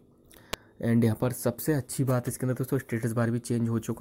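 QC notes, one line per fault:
0.53 s, electrical switching spike: a sharp snap lasting a few milliseconds and peaking at about -10 dBFS, sitting on top of the sound rather than interrupting it. The shape points to a nearby switch or motor arcing, likely induced into the audio line.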